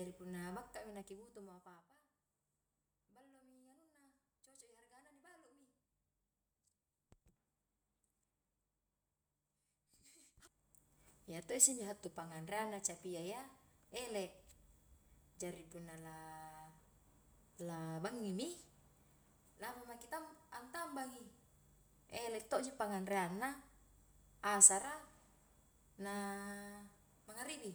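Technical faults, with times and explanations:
Nothing here needs flagging; there are no technical faults to point out in this speech recording.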